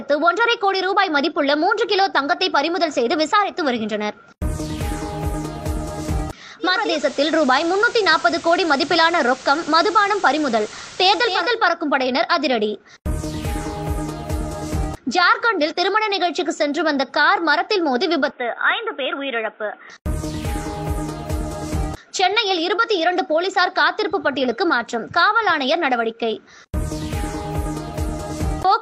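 From 6.59 s to 11.6 s the sound takes on a steady hiss, well below the programme level, with a slight level shift of about 1 dB. Each transition is a smooth cross-fade lasting 470 ms. This is digital radio blending to analogue: the receiver lost its digital stream and faded over to the station's FM broadcast, whose noise floor accounts for the hissier stretch, before fading back.

From 18.3 s to 19.9 s the sound abruptly turns boxy and thin, with a quieter level by roughly 5 dB, and a new background noise about 30 dB down. There is no gap at the change; the tone simply flips, then recovers just as suddenly. The likely cause is an input switched to a poorer device, with the recording briefly taken from a narrower-band microphone or headset path that has its own coloration and noise.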